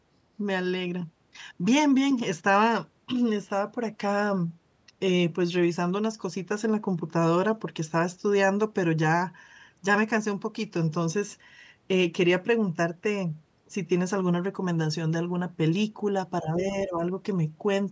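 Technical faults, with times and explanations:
16.41–17.01 s, speech suppressed in double talk: the echo canceller likely treated the talker's own speech as loudspeaker echo while the far side was also speaking, and pulled the level down to block it. The result is a sudden sag in the speech, reaching a drop of about 10 dB at its deepest and covering a little under half a second in total within this stretch, so the sound recedes briefly before the clip ends.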